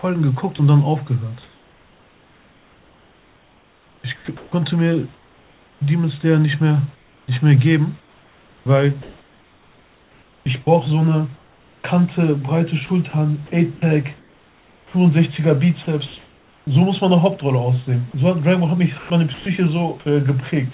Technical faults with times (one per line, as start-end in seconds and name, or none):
0.56-0.59 sound dropped by the voice detector
1.43-5.81 sound chopped by the voice detector
6.95-11.84 sound chopped by the voice detector
12.86-14.93 sound chopped by the voice detector
15.83-16.67 sound chopped by the voice detector
18.11-18.14 sound dropped by the voice detector
18.98-19.46 sound chopped by the voice detector